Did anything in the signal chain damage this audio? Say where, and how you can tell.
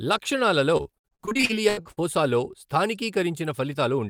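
Yes, the network stage. From 0.77 to 1.99 s the speech turns choppy and robotic, the signature of repeated packet loss: 18 short gaps, the longest 80 ms, about 42% of the stretch patched by extending the preceding sound before the next dropout arrives.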